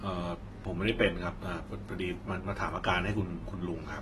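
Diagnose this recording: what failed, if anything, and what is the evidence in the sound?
Codec stage: the speech sounds dull and smeared throughout, with nothing above 12.1 kHz. That lowered cut-off points to likely AAC compression, around 32 kbps.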